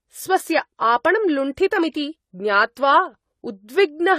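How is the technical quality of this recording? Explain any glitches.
The technical quality is limited by stacked compression artefacts, present from start to finish. This sounds like transcoding between lossy codecs, likely a low-rate HE-AAC encode, around 24 kbit/s, later re-encoded as AAC-LC at around 64 kbit/s. The second encoder spends its bits reproducing the first one's damage and adds its own. The speech carries a mix of smeared, swirly texture and grainy roughness. Nothing is heard above about 14.9 kHz, so the top end sounds closed in.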